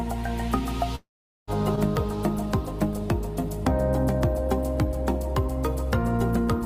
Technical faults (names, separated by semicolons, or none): long network dropout